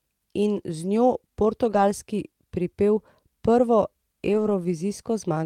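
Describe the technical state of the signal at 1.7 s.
At 1.7 s the stream has a lost packet rebuilt from error correction, spanning 1.69 to 1.79 s. Packets went missing in transit, and the decoder filled the hole with the low-bitrate backup copy each following packet carried. The rebuilt stretch sounds like about 60 ms of audio, which points to roughly three 20 ms packets. There is no dropout, but the speech over that span turns briefly rougher and noisier before clean decoding resumes.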